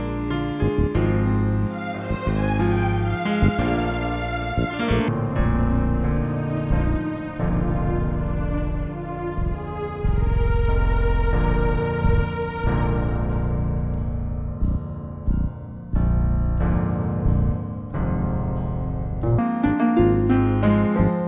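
From 5.08 s to 19.39 s, the audio runs into a wrong sample rate fault. It plays at half speed and drops a full octave, about 12 semitones, so everything sounds low and dragged out. That fits 16 kHz material being played back at 8 kHz with no conversion.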